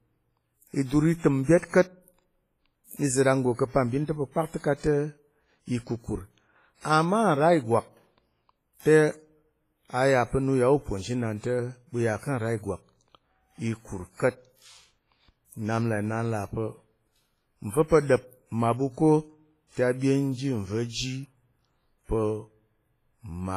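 A speech recording carries heavy transform-codec damage throughout, likely WMA compression, with quantisation noise smearing around syllables into a ringing, washy hiss that swells with the signal, as expected near 24 kbps. A spectrogram shows a hard ceiling at 15.4 kHz, patchy gaps where weak components vanish, and blurred energy around onsets.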